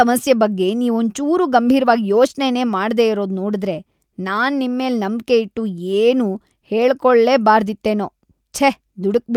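No technical faults can be heard anywhere in the recording, with the signal holding steady and intact throughout.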